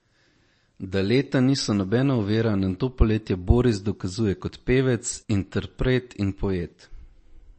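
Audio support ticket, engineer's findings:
MP3 compression, throughout. Hard treble ceiling near 8.4 kHz on the speech; sibilants dulled, watery swirl in quiet detail, smeared onsets. Likely cause: low-rate MP3 encode, damage consistent with roughly 34 kbps. Encoder short of bits, so it drops everything above the cutoff and zeroes weak frequency lines, which flicker on and off between frames and produce the swirl. Damage plainly audible.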